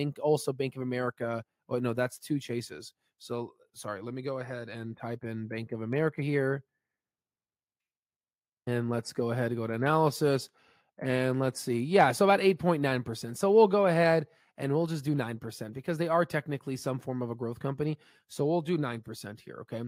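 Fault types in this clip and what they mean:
No technical faults detected.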